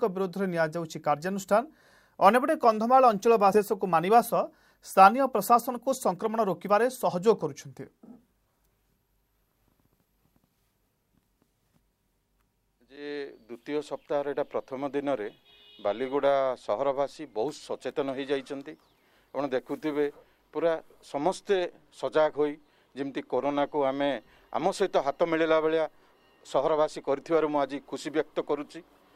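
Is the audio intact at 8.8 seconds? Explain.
No. At 8.8 seconds the audio is inside a jitter buffer speed-up that runs from 3.71 to 10.72 s. The receiver's buffer had built up more audio than its target. To shed that backlog, it cut out many tiny slices, each one or a few pitch periods long. About half a second was dropped in total. The sound plays at roughly 107% speed with unchanged pitch, so it comes across as hurried.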